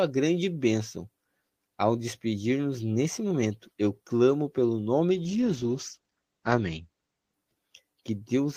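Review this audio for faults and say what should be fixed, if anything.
Call bitrate drop, 5.14 to 7.41 s: bandwidth narrows from 20 kHz to 8 kHz and turns coarse, consistent with roughly 12 kbps. Unlike packet loss, the sound never drops out. A higher minimum bitrate and steadier bandwidth estimation would prevent it.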